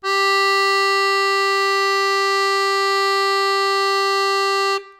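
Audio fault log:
Nothing to log here, as the music runs along without a single fault turning up anywhere in it.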